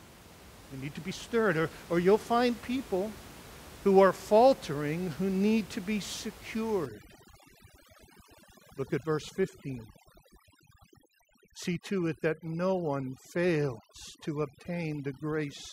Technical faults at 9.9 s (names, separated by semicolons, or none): overdone noise removal